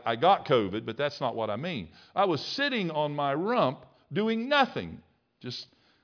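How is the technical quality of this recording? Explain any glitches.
No glitches turn up anywhere in this recording; there's nothing to point to and nothing to explain.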